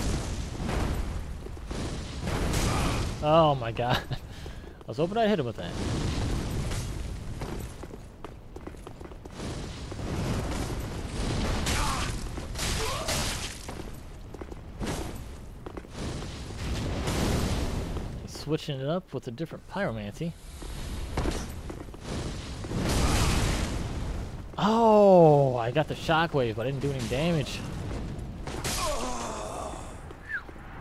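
At 13.19 to 13.22 s there is a Bluetooth stutter. Data arrived late or went missing, so the receiver replayed its last buffer, giving a brief buzzing repeat. About 27 ms of audio is skipped, consistent with two lost packets, and the sound resumes further along.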